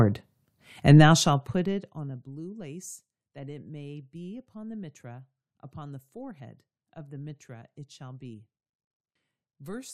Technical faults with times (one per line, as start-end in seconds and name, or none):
none